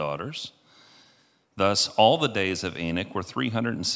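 No technical faults can be heard in this speech recording; the signal stays continuous and steady throughout.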